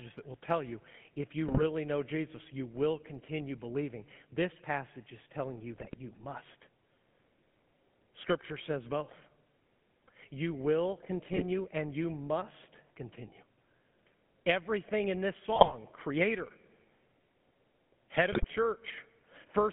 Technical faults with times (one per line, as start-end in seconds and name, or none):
0.00-19.72 GSM full-rate codec
1.48-1.63 GSM bit errors
5.76-5.96 GSM bit errors
11.32-11.44 GSM bit errors
15.56-15.75 GSM bit errors
18.32-18.45 GSM bit errors